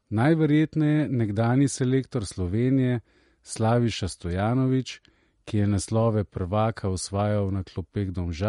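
From start to finish the speech carries plainly audible MP3 compression damage, likely from an encoder starved of bits. Nothing is heard above 11.2 kHz, where the treble was cut off. Weak detail flickers in and out, giving a watery, swirly sound. This fits a 48 kbps stream.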